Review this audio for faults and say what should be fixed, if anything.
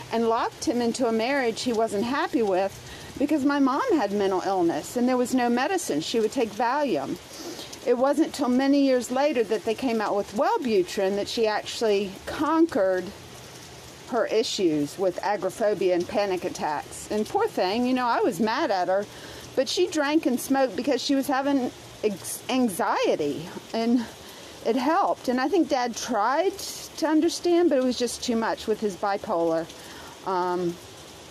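No faults were heard in this recording, so nothing needs fixing.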